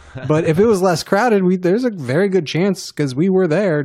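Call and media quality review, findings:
Nothing stood out on listening to this speech recording that would warrant a finding.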